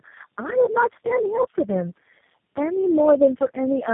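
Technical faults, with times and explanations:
Throughout: tandem speech coding. The speech sounds rough, muffled and warbly, as if it passed through several narrowband speech codecs in a row, which fits about four low-rate coders ending in something like G.729A. Each one re-encodes the previous one's already damaged output, so the artefacts stack up instead of staying at single-codec level. Nothing comes through above 3.7 kHz, which is why it sounds so dull and boxy.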